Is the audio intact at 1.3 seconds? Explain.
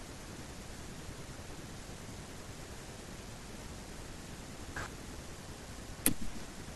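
Yes, at 1.3 seconds the speech plays through intact, with no dropout, glitch or other fault audible at that moment.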